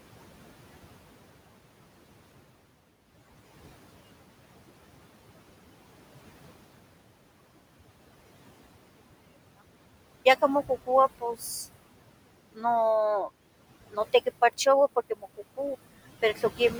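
A speech recording with room noise sitting about 15 dB below the voice carries noise suppressor artifacts throughout. The suppressor pulls that steady background down by about 21 dB between phrases and lets it back up under the speech. On a spectrogram, the gaps show speckled, flickering patches in place of an even noise floor. There is also speech cut by the noise suppressor at 11.19–11.45 s, 12.55–12.65 s, 13.91–14.27 s and 14.96–15.59 s, where quiet parts of the voice were treated as noise and dipped by about 20, 17, 16 and 21 dB. Each event affects only a tenth to a fifth of a second of sound, and those parts sound swallowed. The waveform shows brief notches in the envelope, and the spectrogram shows faint, missing consonant energy.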